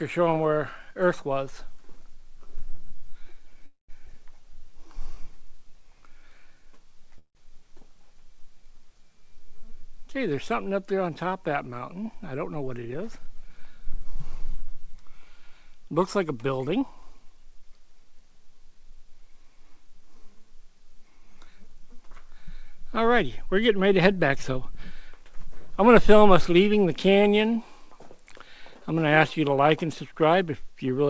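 At 3.66 s the audio stops moving forward for about 226 ms, until 3.91 s. This is a call audio freeze. The last sound is carried on as a fading buzz or hiss, and the final 130 ms of it are silent. The likely cause is delayed packets draining the jitter buffer. When the packets arrive, the audio resumes where it stopped. Nothing is lost. A gap is simply inserted. The same fault returns at 7.18 s and lasts until 7.37 s. That one fills 166 ms, and its last 80 ms are silent.

At 4.07 s there is a skip ahead. About 70 ms of audio is dropped, either in transit or by an overfull jitter buffer. Playback then jumps forward across an 8 ms join. The sound on either side is butted almost directly together.

From 4.42 s to 5.29 s comes a jitter buffer slow-down. The buffer was low, so the receiver repeated single pitch periods or slivers of pause many times over. This added 70 ms. The audio plays at about 93% speed with the pitch unchanged. 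Sounds stretch out, and there may be a slight warble.

Two jitter buffer speed-ups follow. The buffer held more than its target, so the receiver cut out short pieces of one or a few pitch periods. The pitch stays the same, but the audio runs fast. From 12.03 s to 14.16 s it plays at 106%, and roughly 150 ms is removed. From 16.69 s to 19.06 s it plays at 111%, and roughly 300 ms is removed. This second stretch is the more hurried one.

Underneath all of this, the call path adds its usual coding noise. Nothing is heard above 8 kHz, which fits G.722 at 64 kbps.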